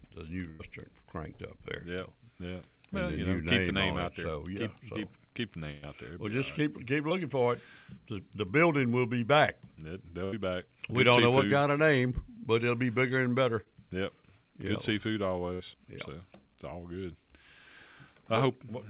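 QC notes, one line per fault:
0.50–0.61 s, 5.71–5.87 s, 10.25–10.34 s, 15.54–15.62 s: burst of packet loss. Several packets in a row arrived too late or not at all. The missing stretches are about 100, 100, 80 and 60 ms. The receiver stretches the last sound across each hole and lets it fade, for about 90, 110, 75 and 60 ms. Then the audio jumps ahead. What fell in the gap is simply gone.
7.09–7.13 s, 13.64–13.68 s: short concealed packet loss. About 20 ms never reached the decoder in time. The receiver patches it by continuing the preceding sound for about 15 ms, then blends back into the real signal. The result is a brief smear or wobble. Both are heard through a narrowband call path with nothing above 4 kHz.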